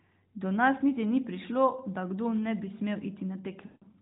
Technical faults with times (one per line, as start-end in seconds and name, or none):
3.66-3.85 lost AMR speech frames